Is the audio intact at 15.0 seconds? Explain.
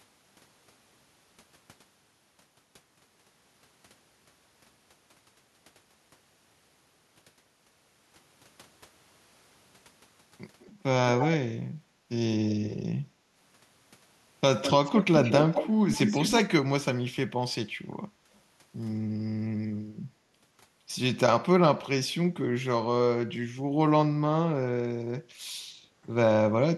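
No. At 15.0 seconds the clip is inside an echo leak running from 14.62 to 15.05 s. A delayed copy of the speech, trailing it by about 205 ms and only a few decibels quieter, sits audibly under the direct signal. This is likely caused by a far-end loudspeaker whose echo canceller failed to remove what its microphone picked up, so the residue was sent back down the line as a doubled echo.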